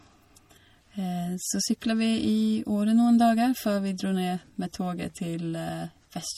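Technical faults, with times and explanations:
Throughout, MP3 compression: plainly audible watery artefacts, likely from MP3 at a bitrate near 48 kbps; the spectrogram shows flickering holes and nothing above 17.8 kHz.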